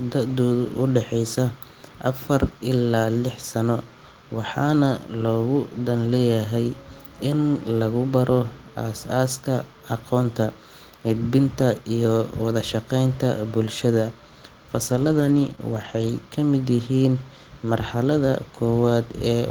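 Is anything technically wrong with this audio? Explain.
Yes. The speech has two related network faults, clustered around 15 s.

Lost packet rebuilt from error correction occurs at 6.07–6.17 s, 10.23–10.25 s, 14.91–15.53 s, 15.59–15.61 s and 15.73–16.07 s. Packets went missing, but each following packet carried a low-bitrate backup copy, which the decoder played instead. Nothing drops out. Those stretches turn rougher and noisier. The long 14.91–15.53 s run, with about 320 ms rebuilt, points to many separate losses close together. Unlike concealment, the real content is still there, only at lower quality.

Short concealed packet loss occurs at 15.55–15.59 s, inside that cluster. Here no backup copy arrived, so about 20 ms of audio is simply missing. The receiver patched roughly 13 ms of it by extending the preceding sound and then blending back into the incoming stream. This is heard as a brief smear or wobble rather than a grainy, degraded version of the actual speech. 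That extrapolated guess, instead of a rough copy of what was said, separates it from the rebuilt packets around it.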